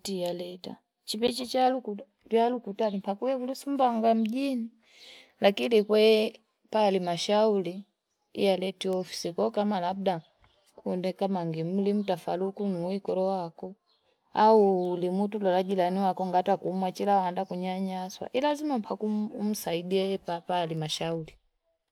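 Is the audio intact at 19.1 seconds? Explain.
Yes, the audio at 19.1 seconds is intact, with no dropout, click, distortion or other fault audible at that moment.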